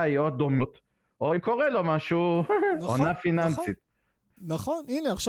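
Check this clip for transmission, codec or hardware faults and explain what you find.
Two transmission faults affect this speech clip.

Skip ahead, 0.59 to 0.61 s: about a second of audio was dropped and playback resumed with what was already waiting. Playback jumps forward with no fill, joining two moments of speech that were roughly a second apart.

Jitter buffer speed-up, 0.82 to 3.42 s: the buffer was still holding more audio than its target, so the receiver repeatedly trimmed short pitch-period pieces, removing around 0.4 s. The speech runs at 115% speed at unchanged pitch and sounds hurried.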